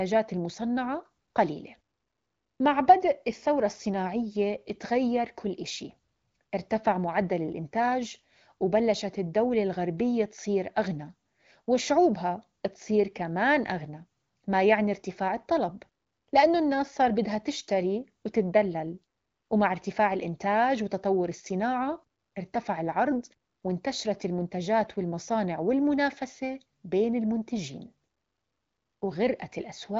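No technical faults can be heard in this speech recording, which carries the light coding character of the AMR wideband (HD Voice) codec, with nothing above about 7.5 kHz.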